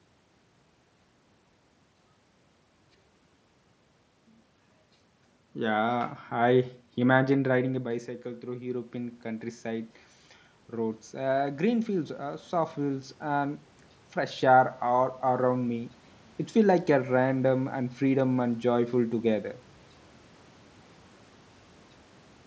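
From 7.65 s to 15.99 s the voice and the room noise behind it swell together, climbing slowly by about 8 dB. This is automatic gain rising. The talker moved back around 7.5 s, the input fell about 13 dB, and the gain control gradually compensated.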